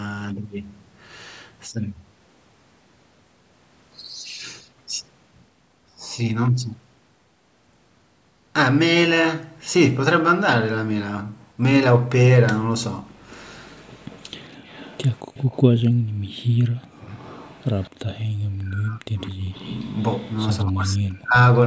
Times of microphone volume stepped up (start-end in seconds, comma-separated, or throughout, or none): none